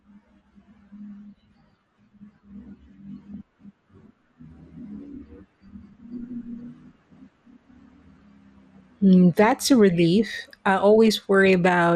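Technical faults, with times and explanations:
Throughout: MP2 compression. The speech sounds dull and plainly damaged, with a granular, gurgling roughness. This is likely low-rate MPEG Layer II coding, and the degree of damage fits a rate of about 80 kbps. With so few bits, the upper sub-bands are switched off and the remaining ones are coarsely quantised. On a spectrogram the top end is cut off in flat-edged blocks that flicker on and off from frame to frame.
3.34 s: DAB burbling. A few brief watery blips break over the speech. Bit errors, only a small fraction of the stream, slipped past error correction into the MP2 data. Corrupted samples put short blips of noise into single sub-bands, which gives the watery sound. A spectrogram would show isolated bright rectangular patches confined to individual frequency bands.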